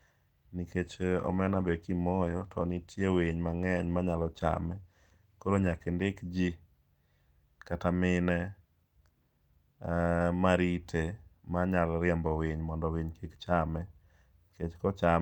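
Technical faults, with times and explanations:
0.82–7.65 s, call bitrate drop: the speech turns muffled and rough, with a watery edge, worst for about 5 s before clearing. The call's bandwidth estimate fell, so the encoder dropped from 64 kbps to 16 kbps, coding coarsely and trimming high frequencies.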